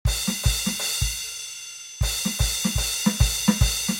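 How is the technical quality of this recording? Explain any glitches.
The recording has one clear fault, a feedback whistle that runs through most of the music.

Feedback whistle, from 0.80 s to the end of the clip: a thin, steady tone at about 6.1 kHz sits behind the music, well below it in level, and swells and fades slowly in strength without building up. The likely cause is a loudspeaker-to-microphone loop held right at its feedback threshold, so that single high frequency keeps recirculating and sustaining itself instead of running away into a howl.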